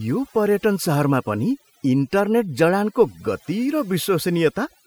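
A short speech recording with overdone noise removal throughout: the background drops and breaks up into twinkling specks. A noise reducer set too strong is cutting bands near its noise estimate, taking quieter voice detail with them.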